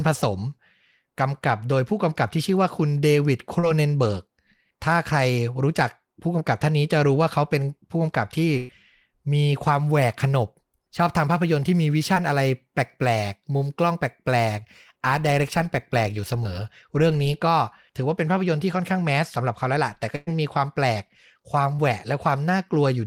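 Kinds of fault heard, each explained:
Short concealed packet loss: Between 20 and 40 ms of the call arrived too late or not at all, and the receiver extended the preceding speech to cover the hole. At 3.59, 12.15, 16.44 and 21.76 s this leaves a brief smear or wobble where detail drops out.
Burst of packet loss: About 120 ms of consecutive audio went missing at 8.57 s and again at 20.16 s. The decoder stretched the last sound across more than a tenth of a second, fading it as a held buzz or hiss, before the speech resumed further along.
Sample clock jitter: From 9.8 to 16.7 s the converter's clock wavers by a few microseconds, so samples land slightly off time. This adds a roughness around 35 dB below the speech that grows on loud, bright sounds and disappears in pauses.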